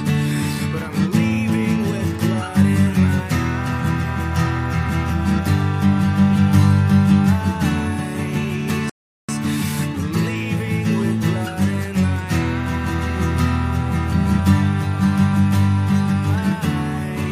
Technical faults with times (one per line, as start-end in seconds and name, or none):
8.90-9.29 rebuffering stall